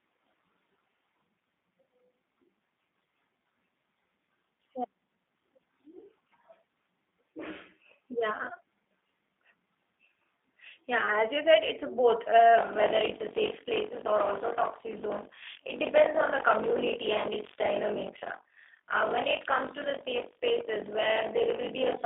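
Throughout, the speech carries plainly audible G.729 codec damage: a rough, synthetic texture from the low-rate frame-by-frame rebuild. A spectrogram shows the energy confined to roughly 200 Hz to 3.7 kHz and nothing above 3.8 kHz.

From 12.57 s, just after "said it's a both", to the end, buffer tearing adds a robotic 46.9 Hz buzz, consistent with a 1024-sample buffer. About a third of each period replays audio some 40 ms old. The waveform shows hard steps at each join, and the spectrogram shows regular vertical striations.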